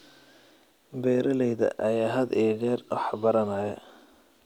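No technical faults are audible.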